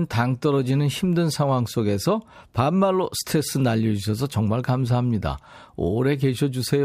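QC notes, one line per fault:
Nothing to flag here; the speech comes through with no technical faults to note.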